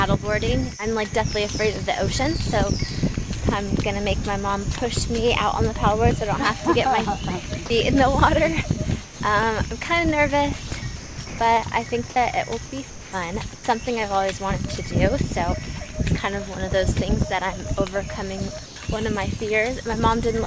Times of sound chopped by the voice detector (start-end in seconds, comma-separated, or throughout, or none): 10.68-11.38, 12.66-13.12